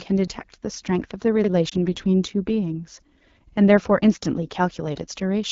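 Throughout the clip the speech carries the sound of the AMR wideband (HD Voice) codec at a low setting, with a rough, raspy, buzzy texture that fits one of its lowest rates, around 8.85 kbit/s. The codec models speech up to 6.4 kHz with a pulse-excited vocal tract filter and fills 6.4 to 7 kHz with shaped noise. On a spectrogram the harmonics look smeared below 6.4 kHz, a diffuse noisy band sits above it, and nothing appears beyond 7 kHz.

From 1.69 to 1.74 s the speech briefly dips and warbles because of a lost AMR speech frame. The decoder had no valid data for that stretch, which fits a single 20 ms frame, so it repeated the previous pitch and vocal tract settings at reduced gain. On the waveform the envelope sags there. On the spectrogram the harmonics flatten into a short, unchanging, fainter patch before normal speech returns.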